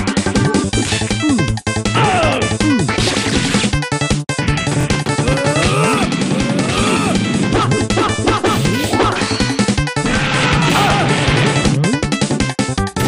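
Right around 4.81 to 4.85 s there's a repeated buffer: fresh audio didn't show up in time, so the same roughly 23 ms chunk got played twice more, which fits a 1024-sample buffer. You hear a quick stutter with hard joins, and nothing seems to go missing.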